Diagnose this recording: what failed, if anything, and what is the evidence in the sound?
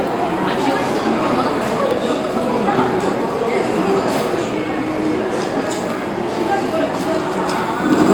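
Two jumps in the sound, at 1.91 s and 4.98 s, with no gap in between, point to the driver or buffer stage, most likely a dropped buffer (overrun). Samples got overwritten before capture, so roughly 30 ms and then about 10 ms went missing and the edges butted together.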